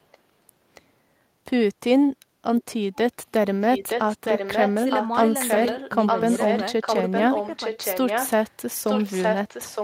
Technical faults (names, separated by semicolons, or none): echo leak